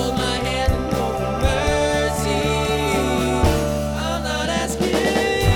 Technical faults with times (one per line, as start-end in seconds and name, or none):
none